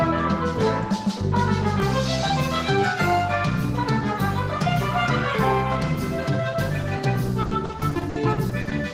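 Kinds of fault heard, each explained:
Repeated packet loss (robotic sound): From 7.41 to 8.73 s, near the end, the audio keeps breaking up. About a dozen short holes follow one another, the longest about 60 ms. Each hole is covered by stretching the last bit of sound forward. The patches add up to about 380 ms, roughly 29% of that stretch. Because real sound and patched sound alternate so quickly, the passage turns choppy and takes on a robotic edge, with pieces missing.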